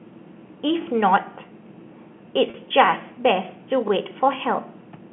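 At 0.82, 1.84, 2.86 and 3.88 s, overlapping chunks appear. Each roughly one-second block starts 20 ms before the previous one ends, so that slice plays twice and causes a brief stutter. The waveform shows a duplicated 20 ms segment with a small step at each join.

From 2.50 to 2.54 s, packet loss with pitch repetition fills a 40 ms gap, which fits two lost 20 ms packets. The receiver loops the last pitch period, so the sound holds as a short buzzy tone. On the spectrogram, frozen, perfectly flat harmonics bridge the gap inside the 3.4 kHz telephone band.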